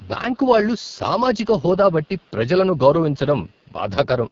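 AMR wideband (HD Voice) codec damage runs throughout the whole clip. The speech sounds rough and raspy, as the coder's crude pulse model of the vocal tract loses detail. That harshness points to its lowest 6.6 kbit/s mode. Nothing is heard above 7.3 kHz.

An echo leak appears at 0.00 to 0.09 s, 0.32 to 0.38 s, 1.91 to 2.31 s and 3.47 to 3.73 s. In each stretch, a very faint copy of the voice, far below the main speech, trails it by 310 ms. This is likely a loudspeaker pickup that an echo canceller did not fully remove.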